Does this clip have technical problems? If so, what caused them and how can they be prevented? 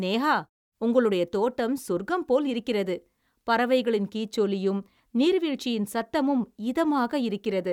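No, there are no technical problems to prevent here.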